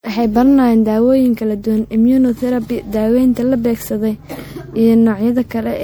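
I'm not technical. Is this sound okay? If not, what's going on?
No, the speech has generation loss throughout: it sounds swirly, hollow and smeared, with blurry starts, likely from being saved as MP3 about five times over.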